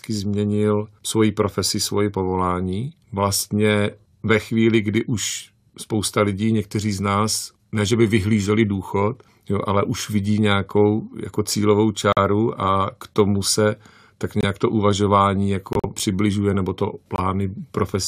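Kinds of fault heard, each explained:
Corrupt frame muted: the decoder rejected damaged compressed frames and silence replaced them, so the speech cuts out abruptly four times for about 40 to 120 ms, e.g. after "k tomu se tak". The waveform shows flat silent stretches, the spectrogram blank vertical columns. Timing stays intact.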